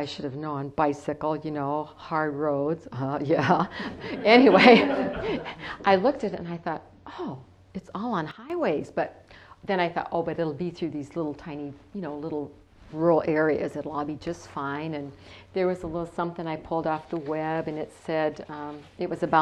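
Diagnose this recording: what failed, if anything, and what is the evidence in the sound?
A sudden gain jump occurs at 8.31 s: sound and background noise drop together by about 12 dB with no ramp, and the level recovers at 8.50 s. The likely cause is a digital gain setting applied instantly in the driver or processing chain.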